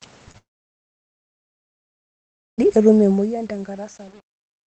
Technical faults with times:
0.31-0.36 short concealed packet loss
0.38-2.66 long network dropout
2.91-4.66 truncation distortion on a fade

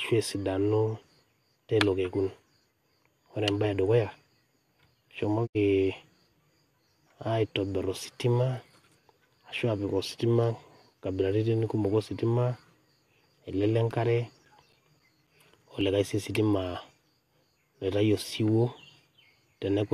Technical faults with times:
5.45-5.57 digital broadcast dropout
13.64-16.08 CD scratch ticks

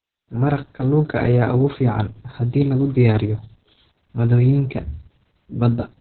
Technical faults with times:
0.00-6.00 Opus voice compression

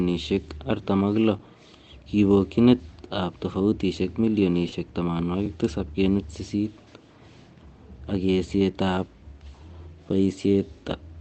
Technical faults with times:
1.39 underrun with held sample
4.68-4.74 short concealed packet loss
5.46 underrun with held sample
10.09 underrun with held sample

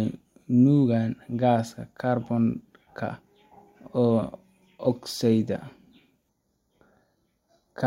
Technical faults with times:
6.29-7.87 channel delay (comb filtering)

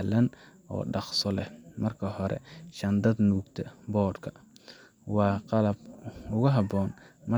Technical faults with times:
none

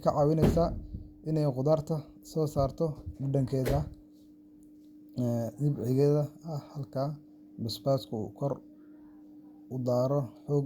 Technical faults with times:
none

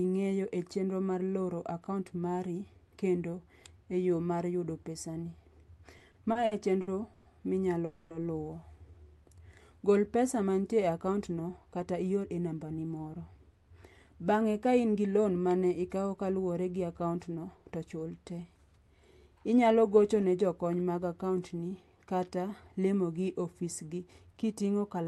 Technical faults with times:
5.97-7.27 repeated stalls (stutter)
7.85-8.12 call audio freeze
10.97-12.79 jitter buffer speed-up
23.99-24.53 jitter buffer speed-up

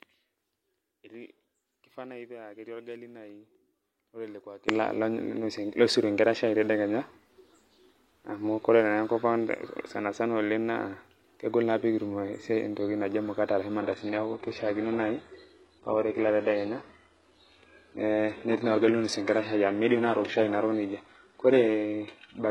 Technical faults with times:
0.00-4.68 one channel inverted
13.81-22.50 adaptive stream at a lower bitrate

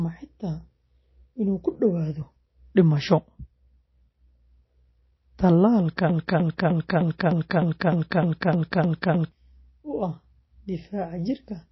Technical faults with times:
0.00-11.71 MP3 compression
6.09-9.32 broken-record loop

